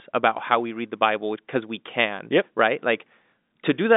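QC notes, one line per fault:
Nothing to flag here; it's telephone-band speech through G.711 A-law at 64 kbps, so the sound sits between about 200 Hz and 3.7 kHz with nothing above 3.8 kHz, as a phone line should.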